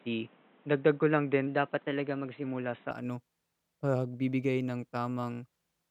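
From 0 to 2.91 s the input was likely on a poorer device, an input switched to a narrower-band microphone or headset profile. Nothing passes above 3.9 kHz, so the speech sounds dull and boxy, with new background noise roughly 30 dB down, and it clears at 2.91 s without a gap or any real level jump.

Between 1.47 and 2.44 s, a clock-matching buffer was likely refilled or drained through a drift correction step, with playback sped up by 6.29%. Pitch rises by 106 cents, a little over a semitone, so the speech sounds briefly detuned and hurried before snapping back.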